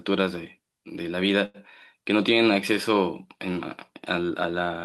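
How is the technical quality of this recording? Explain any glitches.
The recording has one glitch, a short stall from a late packet between about 1.45 and 1.57 s. A packet arrived late, the jitter buffer ran dry, and the receiver stretched the last bit of sound for about 88 ms, then resumed where it left off. Nothing is lost, but everything afterwards runs about 88 ms later. You hear a sound held unnaturally long with a slight buzz or dip. On a spectrogram the harmonics run flat and repeated for that span, and the waveform shows a periodic, looped texture.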